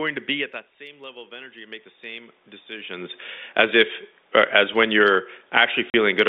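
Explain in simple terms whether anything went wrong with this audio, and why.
Two things went wrong in the system. The first is automatic gain rising. Around 0.5 s the talker moved and the input became much quieter, so the automatic level control turned its volume up, slowly, from 0.78 s to 3.05 s, between "to be at that" and "as if as when". Because it boosts everything it hears, the voice and the room noise behind it swell up together over those two seconds, rather than the voice alone coming back.

The second is packet loss filled with silence. Near the end, the audio travels in small chunks, and some never arrived. The receiver played nothing in their place, so the sound drops out completely from 5.90 s to 5.94 s. That 40 ms hole fits two missing chunks, and its start and end are abrupt.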